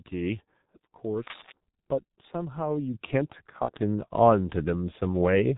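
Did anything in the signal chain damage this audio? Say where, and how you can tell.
Yes. At the codec stage, heavy G.723.1 coding at 6.3 kbit/s runs throughout: the speech is muffled and hoarse, with nothing above 4 kHz and smeared consonants.

In the analogue wiring, there's cable scratch noise from 1.27 to 1.52 s, a dense, uneven rustle nearly as loud as the speech. It's likely a worn contact being moved.

Call processing stepped up the microphone volume at 2.94 s. Voice and background jump about 7 dB together, the signature of automatic input gain adjustment.

On the network, there's VoIP packet loss concealed by the speech codec from 3.65 to 3.72 s. About 30 ms is stretched into a fading, extrapolated sound, which fits one lost frame being extrapolated.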